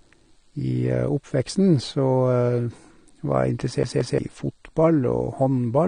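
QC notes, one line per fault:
Throughout: AAC compression, likely from AAC-LC at a low bitrate, which fits something around 32 kbps. The codec damage is plainly audible. The speech sounds dull and smeared, and there's a watery, fizzy edge on sibilants and held sounds. The encoder is short on bits, so it quantises the spectrum coarsely and leaves gaps in the bands. Nothing sits above 21.4 kHz, but the texture problem is well below that.
3.83 to 4.18 s: CD stuck on one turn. The same 176 ms slice plays twice in a row, with a tiny dropout at each jump. It's the quick, mechanical stutter of a skipping disc, where the laser hits a scratch and falls back to the same spot on each rotation. The even loop length makes it sound like a machine glitch and not a stumble in the speech.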